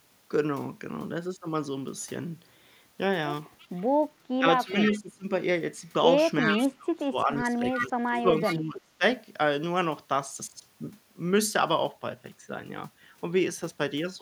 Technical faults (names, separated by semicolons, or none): echo leak; speech suppressed in double talk